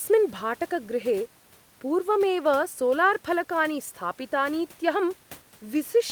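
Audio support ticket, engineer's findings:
No faults found on this speech clip, just some ordinary room noise sitting about 30 dB below the talking, which comes from the recording space rather than anything in the system.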